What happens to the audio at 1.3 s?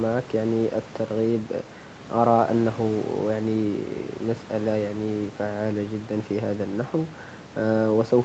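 Nothing goes wrong at 1.3 s: the speech there passes through intact, with only the expected call-path character of a band that stops around 8 kHz and faint room noise about 18 dB below the voice.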